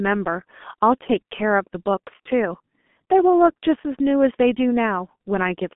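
From start to finish, the speech passes through the G.723.1 codec, an old internet-telephony coder. Nothing reaches above 3.7 kHz, and the usable band sits near 200 Hz to 3.5 kHz. The sound points to its 6.3 kbit/s mode. At that rate the coder builds each 30 ms frame from a coarse voice model. The damage is heavy. The voice turns muffled and hoarse. Consonants smear together and lose their edges.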